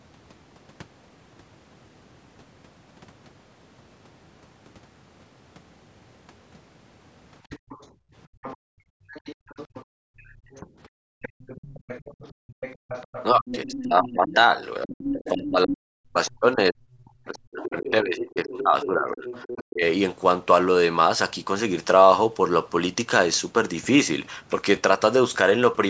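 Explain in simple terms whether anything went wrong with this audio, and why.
From 7.55 to 19.64 s, a faint second voice is heard under the talker. It is the other side's voice leaking through, likely from the talker's own loudspeaker.

Between 7.59 and 12.89 s, the room sound drops away for about two seconds in all. This is background gated by the echo canceller, which turned the microphone down hard.

At 10.61 to 10.66 s the talker's voice briefly dips. From 13.31 to 19.83 s it fades or cuts out for about four seconds in all. This is speech suppressed in double talk, likely because both sides spoke at once.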